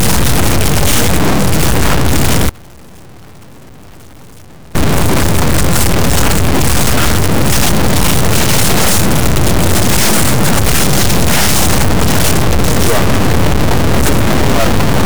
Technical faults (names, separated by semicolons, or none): stuck bit; audio dropout to a faint residue